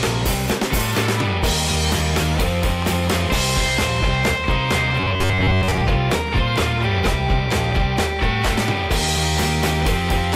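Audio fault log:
5.00–5.81 s robotic sound from repeated short buffers: new audio likely arrived too seldom, so playback kept repeating a short slice, which fits a buffer of about 10.7 ms, in place of most of the real signal, forcing a fixed 93.8 Hz rigid, metallic buzz.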